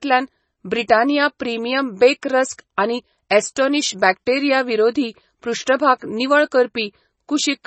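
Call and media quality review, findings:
MP3 compression, whole clip. Treble absent above 8.3 kHz, watery, swirly texture on sibilants, smeared onsets. Likely a heavily starved MP3 encode, consistent with roughly 24 kbps: encoder trims the top band at a fixed cutoff and drops weak spectral lines that flicker between frames.

Pre-echo, 3.55 s, after "रस्क आनी", before "बॅक्टेरिया विरोधी". Brief hiss, about 12 ms, ahead of a sharp attack, which sounds softened. Transform codec spread quantisation noise across the block, leaking into the quiet gap before the transient.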